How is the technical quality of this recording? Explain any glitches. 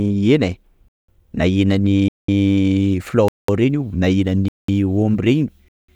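The speech keeps dropping out in a regular pattern: five gaps between chunks, at 0.88, 2.08, 3.28 (just before "reny na"), 4.48 (just after "reny na") and 5.68 s, each 200 ms. The audio arrives in one-second blocks with silence left at every join, likely from codec padding or late chunk playback, so you hear short holes.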